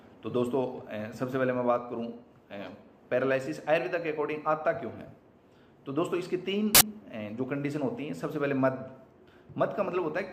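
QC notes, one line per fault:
6.75–6.81 s, file tags played as audio: embedded cover-picture data was decoded as samples, giving a 60 ms burst of very loud white noise with abrupt edges.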